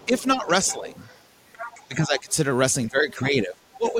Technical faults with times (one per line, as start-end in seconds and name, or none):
0.00-1.19 other side's voice leaking through
0.05-0.91 speech suppressed in double talk
1.52-1.85 other side's voice leaking through
1.85-2.36 speech suppressed in double talk
2.19-2.33 other side's voice leaking through
2.89-3.99 speech suppressed in double talk
3.10-3.24 other side's voice leaking through
3.88-3.93 other side's voice leaking through